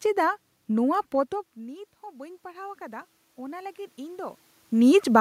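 At 0.95 s a bit error spike flips one sample by a power of two, giving a single broadband tick unlike a dropout, which leaves a gap. From 1.12 to 4.45 s, after the talker moves back around one second and the level falls about 19 dB, automatic gain rising adds about 9 dB. Room noise swells with the speech, which distinguishes it from the talker simply leaning closer again.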